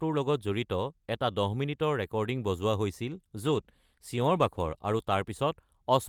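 From 3.42 to 5.69 s, a call bitrate drop makes the speech rough and muffled, fitting a fall from 40 to 18 kbps. It stays continuous, without packet-loss gaps.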